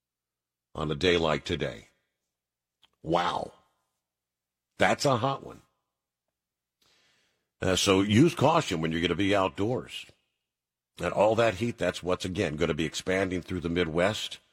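A speech recording with nothing technically wrong with it.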